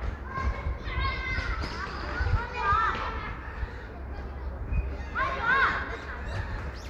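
Nothing in this recording of sounds stood out as a technical problem on listening.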